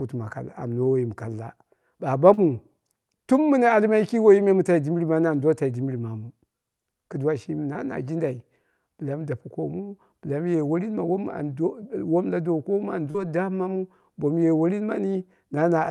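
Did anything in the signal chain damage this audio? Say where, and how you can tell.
Yes. Short concealed packet loss at 2.33 to 2.39 s, 7.73 to 7.77 s (after "kɨduwa shimi", before "na jindai mi dape") and 13.11 to 13.16 s (just before "dammamu bomu ye worin"). This is a network-stage fault. Around 40 ms, or 20 ms in the middle event, arrived too late, and the call receiver's decoder bridged each gap by extending the preceding sound, so each one is heard as a brief smear or wobble before the real audio fades back in.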